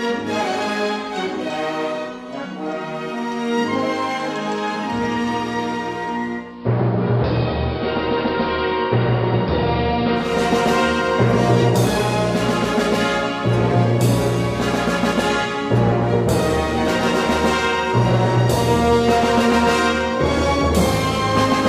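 From 6.38 s to 10.45 s the radio loses its digital stream, a digital radio blending to analogue fault, cross-fading over 0.31 s to the AM broadcast. Hiss sits roughly 30 dB down, and level drops about 2 dB.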